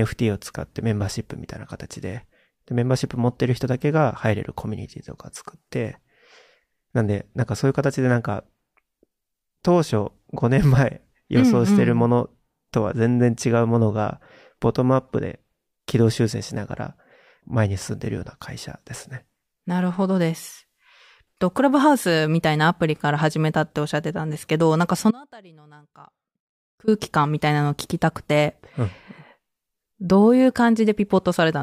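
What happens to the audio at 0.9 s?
Nothing goes wrong at 0.9 s; the speech carries on intact through that moment, with no dropout, click or distortion.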